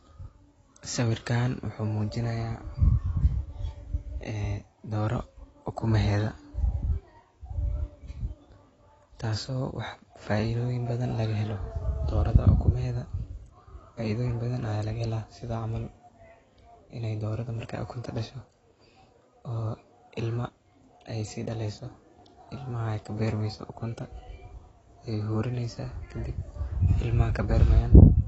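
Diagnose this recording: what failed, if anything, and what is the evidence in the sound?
The codec stage is at fault: the speech was likely encoded with AAC compression at a low bitrate, and the damage is plainly audible throughout. The encoder has cut everything above 8 kHz and quantised the remaining bands coarsely against its hearing model, so consonants lose their top and sibilants turn smeared and fizzy, with a warbling texture on sustained sounds. The dullness and artefact level fit an AAC-LC stream around 24 kbps.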